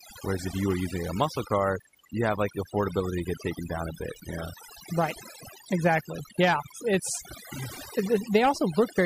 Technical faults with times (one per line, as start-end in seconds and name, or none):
0.00-9.05 overdone noise removal